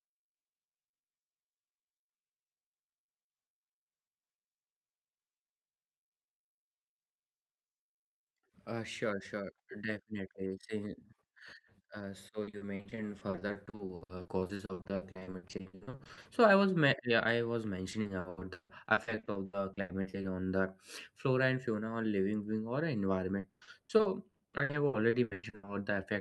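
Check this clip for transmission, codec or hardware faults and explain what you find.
Yes, there is one fault type: repeated packet loss (robotic sound), in three stretches. From 12.43 to 16.27 s, dozens of gaps up to 60 ms leave about 44% of the span concealed. From 17.91 to 20.25 s, between "yeah I was" and "on the flora", gaps reach 160 ms, with 40% concealed. From 23.39 to 25.69 s, after "being or", gaps reach 120 ms, with 43% concealed. Each lost packet is patched by extending the preceding sound, and the patches follow one another closely, so the speech turns choppy with fragments missing. The call codec path around this audio tops out near 12 kHz.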